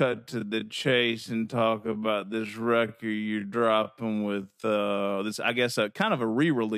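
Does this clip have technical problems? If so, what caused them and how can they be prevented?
Yes, there's a time-stretched section from 0.0 to 4.74 s, slowed to about 0.53x, so the speech drags until the pace snaps back at "this I guess a". It was likely stretched by software padding it to length. To prevent it, trim or re-record rather than forcing audio to fit a slot.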